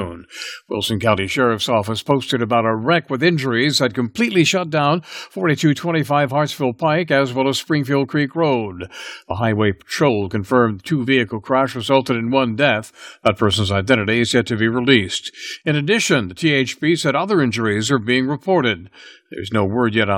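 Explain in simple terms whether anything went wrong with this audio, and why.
Nothing went wrong that I could hear: listening to the whole recording, nothing in the speech stood out as a problem.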